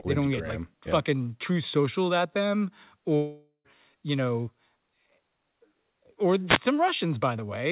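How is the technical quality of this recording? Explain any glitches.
Two glitches stand out in this speech recording, which comes through a call path using G.711 mu-law at 64 kbps, so nothing above 4 kHz is heard.

From 3.16 to 3.67 s there is a long network dropout, likely caused by audio packets that stopped arriving. The receiver stretches the last sound into a fading buzz, followed by roughly 0.1 s of silence. When the speech resumes, about half a second of it is missing. Unlike a radio hit, this fault leaves a gap in the content rather than noise over it.

From 6.47 to 6.59 s a wireless microphone noise hit sounds as a brief swish of static. The analogue FM radio signal fades as reflections cancel, and receiver noise briefly swamps the speech. Nothing is skipped here: the speech carries on underneath the noise burst.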